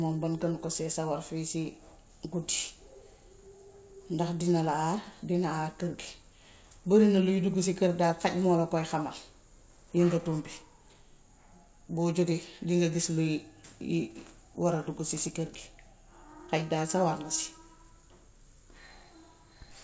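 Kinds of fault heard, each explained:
No faults are heard.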